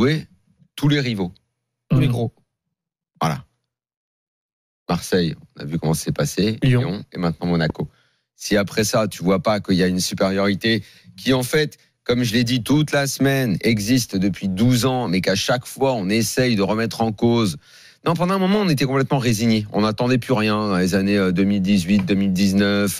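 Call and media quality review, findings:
Loud pop, 7.70 to 7.72 s: one sharp pop standing about 10 dB above the surrounding sound, which continues underneath. Likely a voltage step or pulse from a plug, switch, static discharge or driver glitch, shaped by the downstream circuitry.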